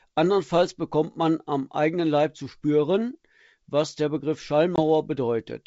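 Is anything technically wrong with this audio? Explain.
Yes. Packet loss on an ADPCM call at 4.76 to 4.81 s drops about one packet, leaving a 20 ms silent gap. The decoder's predictor and step size desynchronise, so the wideband G.722 speech resumes slightly distorted before settling.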